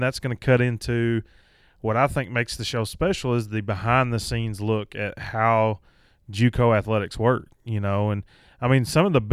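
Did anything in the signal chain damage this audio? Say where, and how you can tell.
No, nothing in this speech recording stood out on listening as damage from any stage of the signal chain.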